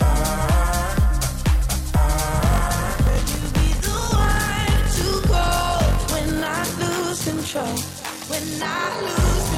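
From 2.39 s, a block size mismatch (padded) fills each block with zeros: a 46.9 Hz buzz, sound slowed to 0.861 speed, timbre unchanged, unlike a sample-rate error. At 8.84 s a corrupt frame decoded gives one glitch peaking near -15 dBFS, misplaced energy rather than a dropped frame's silent gap.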